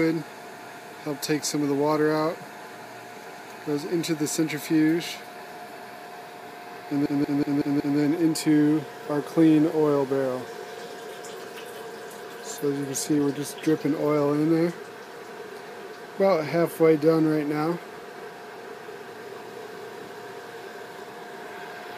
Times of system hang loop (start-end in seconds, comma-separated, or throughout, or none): 7.06-7.99